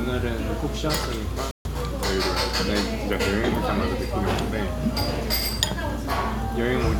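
At 1.51 s the sound cuts out abruptly and returns at 1.67 s, a Bluetooth dropout likely caused by wireless packets arriving too late. Unlike a stall, playback resumes further along, so about 140 ms of material is simply missing rather than delayed.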